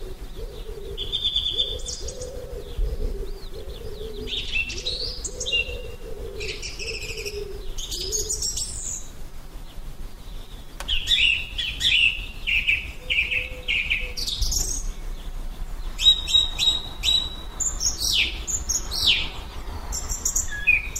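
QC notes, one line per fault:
No technical faults were found in the audio.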